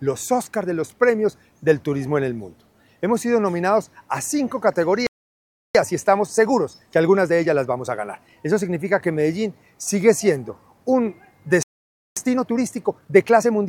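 The player likely ran short of data or had its thread blocked, causing two playback stalls: the audio cuts to silence from 5.07 to 5.75 s (0.68 s) and from 11.63 to 12.17 s (0.54 s). Each stall is followed by time-compressed catch-up, where the player trims and cross-fades small slices to clear its backlog. The sound runs hurried at normal pitch, at 1.15x from 5.75 to 8.75 s and 1.25x from 12.17 s to the end.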